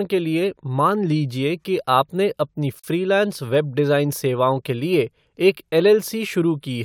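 At 2.79 s, between "लीजिए कि आपने अपनी" and "वेब डिज़ाइन", a 42 ms gap cuts into the speech: a gap at a join of encoded pieces, where untrimmed encoder start delay and last-frame padding sit between separately encoded pieces about 4 s long. Its edges are smeared, and the speech then resumes where it stopped.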